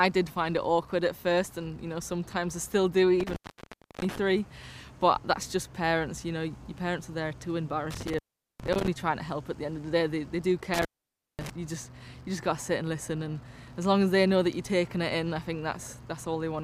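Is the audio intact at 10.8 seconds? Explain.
No. At 10.8 s the audio falls within an intermittent contact fault from 10.74 to 11.50 s. A loose cable or plug connection breaks, so the signal drops out for about 541 ms, with crackle at each edge and faint hiss while the line is open.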